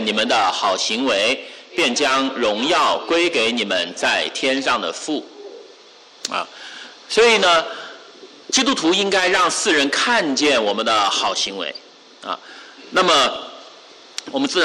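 Bit errors slipping past DAB error correction corrupt MP2 sub-band data, causing DAB burbling: brief blips of noise in single sub-bands from 11.28 to 11.50 s and 13.35 to 13.54 s.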